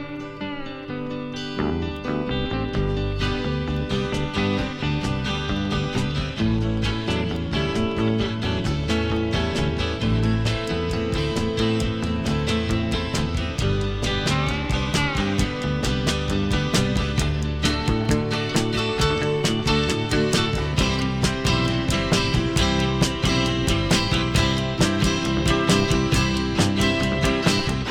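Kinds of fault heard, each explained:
Train of clicks: from 5.65 to 8.85 s, about twenty evenly spaced pulses at 5.3 per second, roughly as loud as the sound, likely from interference.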